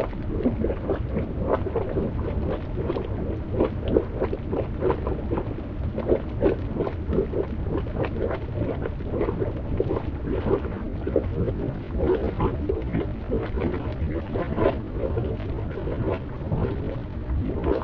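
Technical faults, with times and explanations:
10.58 to 17.84 s, time-stretched section: from 10.58 s to the end, the sound abruptly slows to about 0.74 times its original pace while its pitch stays where it was. This is likely software lengthening the passage to fill a set duration, repeating short overlapping slices of the audio rather than resampling it. Those repeated slices draw the passage out, so this last stretch drags.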